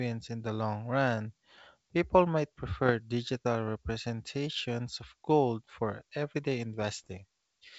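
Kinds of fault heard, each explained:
Bit errors on an ADPCM link: flipped bits on the G.722 link corrupt the adaptive step size and predictor inside the decoder, so each error keeps distorting the output for several milliseconds instead of clicking once. Here that gives rough, popping bursts with brief level jumps, first a short 50 ms patch at 2.86 s just before "digital representations of gold", then a longer, denser stretch from 6.80 to 7.11 s after "of gold for everyday", where the error rate roughly doubles.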